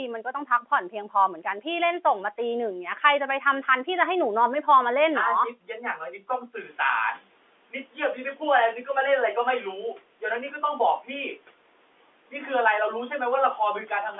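From 0.25 to 0.72 s and again from 5.55 to 6.24 s, there is speech cut by the noise suppressor. Short stretches sink by up to about 11 dB and sound swallowed. At about 6.5 s the room noise jumps by about 14 dB. The noise suppressor is catching up from 6.56 to 7.24 s. The noise comes through with less reduction at first, then fades by about 9 dB over 680 ms.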